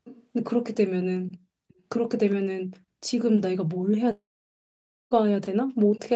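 An echo leak, likely from a far end on loudspeaker whose echo canceller let part of its microphone pickup through, sends a delayed copy of the speech back at 0.04 to 0.27 s, 1.68 to 1.82 s and 2.29 to 2.35 s. The copy trails the original by about 0.4 s. It is faint in the first stretch and fainter still in the two later scraps, heard as short ghosts of the speech rather than a clear repeat.

A long network dropout, likely caused by packets failing to arrive, removes about 1 s of audio from 4.11 to 5.14 s. The receiver briefly carries the last sound on as a fading buzz, and after about a tenth of a second only silence is left for roughly 0.9 s. The speech then resumes further along with that second gone, so the passage jumps rather than pausing and carrying on.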